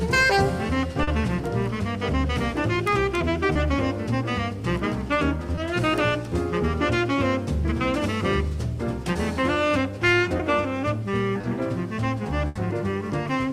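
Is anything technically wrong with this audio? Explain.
Yes. The audio has two kinds of network dropout.

Short concealed packet loss occurs at 1.03–1.09 s, 3.53–3.57 s, 5.55–5.59 s, 10.37–10.41 s and 11.41–11.45 s. Each time a small piece of audio failed to arrive: 40 ms in the first case and 20 ms in the others. The decoder patched the hole by extending the preceding sound and then blending back into the real audio. Each patch is heard as a brief smear or wobble. On a spectrogram these spots show as short stretches where the harmonics or noise bands run flat and repeated before the texture resumes.

A burst of packet loss occurs at 12.47–12.57 s, where 80 ms went missing in one run. The receiver continued the last sound across the gap while steadily lowering its level, so a held buzz or a fading hiss replaces the real content. The audio then resumes further on, with that material gone. 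In the waveform this appears as a decaying, repetitive envelope. On a spectrogram it shows as a smeared, static band that dims before normal detail returns.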